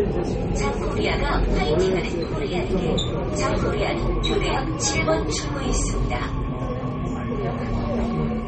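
From start to finish the top end stops dead around 8.4 kHz, and there's a clearly audible watery, swirly quality with smeared attacks. That's likely MP3 compression, starved of bits, which fits a low bitrate of about 32 kbps, with weak frequency lines flickering on and off between frames.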